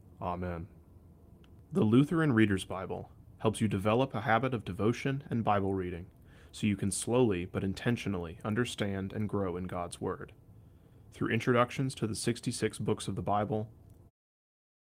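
Nothing's wrong in this speech clip; the only change in level is the gentle fade-out an editor would add, easing away from about 14.0 s and finishing at 14.11 s.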